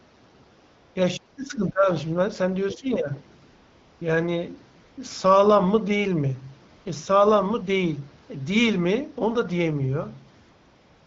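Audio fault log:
0.65–0.95, 1.31–1.37, 3.45–4.01, 4.81–4.97, 6.75–6.85 and 10.41–11.06 s, AMR comfort noise: the phone stopped sending speech frames in pauses, so the real background gets swapped for smooth synthetic hiss that switches in and out.
1.17–1.89 and 2.74–3.13 s, speech suppressed in double talk: the talker dips by about 35 dB, then about 15 dB, likely the echo canceller ducking everything while both sides spoke.
2.68–2.75 s, other side's voice leaking through: a brief scrap of a second voice, roughly 20 dB under the talker, likely loudspeaker echo the canceller didn't fully remove.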